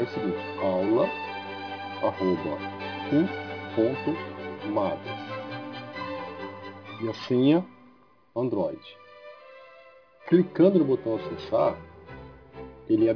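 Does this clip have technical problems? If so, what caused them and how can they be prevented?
Yes. Aliasing runs through the whole clip. The high end has a gritty, metallic edge, and the spectrum runs hard up to about 5.5 kHz. That fold point fits a drop from 48 kHz to 11 kHz done without an anti-aliasing filter. Content above 5.5 kHz is mirrored back below it as unrelated tones, roughly 30 dB under the main signal. Preventing it means low-pass filtering below the new half-rate before any downsampling.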